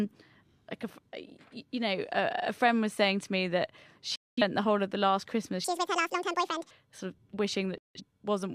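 Digital broadcast dropouts interrupt this speech recording at 4.16 to 4.42 s, just after "saying to me that", and at 7.78 to 8.01 s. Each time the sound fades out over about 3 ms into silence, and speech resumes partway on, at "the whole of the" in the first case. The receiver muted while frames were missing or corrupt, so the content sent in those gaps is gone. The first hole, about 213 ms, fits roughly five lost frames, and the second, about 171 ms, fits roughly four. A section at the wrong speed runs from 5.64 to 6.71 s. Here the speech plays at 1.89 times its proper rate, so it sounds hurried and sits close to ten semitones higher before snapping back to normal. Speed and pitch shift together, which likely means that stretch was played or edited against the wrong clock.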